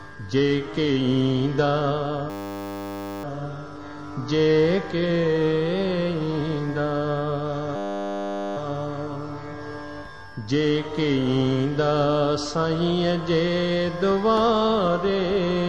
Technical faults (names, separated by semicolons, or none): system hang loop